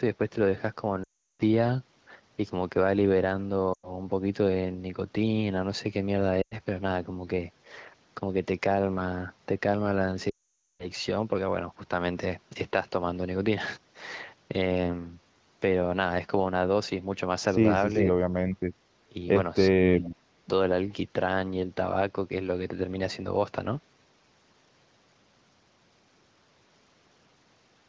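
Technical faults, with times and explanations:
1.03 to 1.42 s, 3.73 to 3.93 s, 6.42 to 6.54 s and 10.29 to 10.88 s: lost AMR speech frames. Corrupted frames were discarded and the decoder repeated the last good pitch and vocal tract settings at falling gain. The 100 ms gaps drop to near silence within two frames. The 360 ms and 500 ms runs drop to near silence within two frames before the speech returns rough.
19.09 to 19.15 s and 19.71 to 20.44 s: speech suppressed in double talk. The speech dips, by roughly 15 dB in the short first event and up to about 30 dB in the second, cutting out in pieces over about half a second. The likely cause is an echo canceller turning down this side's speech along with the loudspeaker echo while the two overlapped.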